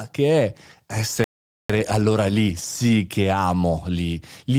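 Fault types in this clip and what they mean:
Sample clock jitter: the converter clock wanders by roughly 0.4 µs, so samples land a touch early or late, adding an error around 50 dB below the speech that tracks loud, steep passages; a spectrogram shows diffuse noise riding under voiced energy, absent in pauses.
Playback stall: the output drops to silence from 1.24 to 1.70 s, about 454 ms, likely because the player ran short of data or its thread was blocked, and the speech resumes on "allora lì sì che"; the waveform shows a flat gap, the spectrogram a blank vertical band.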